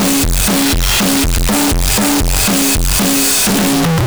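From start to finish, the music shows a float read as integer fault: samples likely written as 32-bit float were decoded as 32-bit integers. Each value's sign and exponent bits then dominate the result, so the waveform collapses into a near-square shape sitting at an almost fixed, high level regardless of the original level. The sound is extremely loud and harsh, with background noise pushed up to match the music, though the pitch can still be followed.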